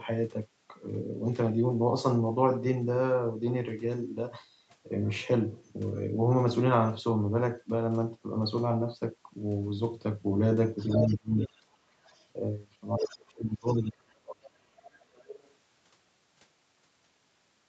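From 10.77 to 12.26 s a second voice sits underneath the talker, only a few decibels quieter. This is the other side's voice leaking through, most likely because the far end played over a loudspeaker and the echo canceller left a residue in the microphone signal. It returns from 12.98 to 13.88 s at a similar level, and again from 14.46 to 15.5 s, where it is much fainter, about 20 dB below the speech.

Within that first overlap, between 11.08 and 11.7 s, the talker's own voice dips and breaks up for about half a second in total, falling by roughly 30 dB at its deepest. A longer stretch follows from 13.0 to 14.75 s, with about a second and a half of dropouts reaching roughly 35 dB. This is speech suppressed in double talk: both sides were likely talking at once, and the canceller, unable to separate the talker from the echo, pulled the whole signal down.

At 11.98 to 12.07 s the room sound briefly drops, by about 11 dB, then comes back. 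That is background gated by the echo canceller, a short hard cut applied to the microphone while the loudspeaker was active. Throughout the clip the audio is band-limited at 8 kHz by the Opus call path.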